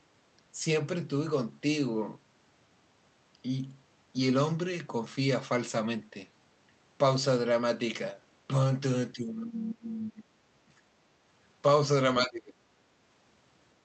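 From 9.13 to 10.81 s the speech sinks hard, by around 30 dB at its worst, then again from 12.22 to 12.64 s by around 25 dB. That's likely speech suppressed in double talk, with the echo canceller treating overlapping talk as echo and ducking it.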